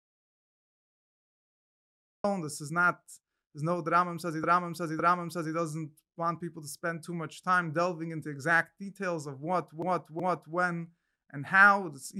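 The audio opens in an audio dropout to silence that is already under way and lasts until 2.24 s. It is silence with no room tone, likely from a lost input. Repeated frames then cause stutters. At 4.44 to 5.55 s, a 557 ms block plays two extra times, adding 1.11 s. At 9.82 to 10.57 s, a 372 ms block repeats twice more, adding 0.74 s.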